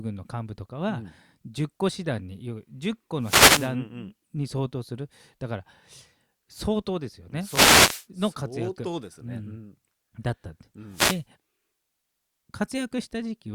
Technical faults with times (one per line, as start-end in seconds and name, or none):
3.20-3.74 wireless microphone noise hit
7.42-8.06 wireless microphone noise hit
10.89-11.24 wireless microphone noise hit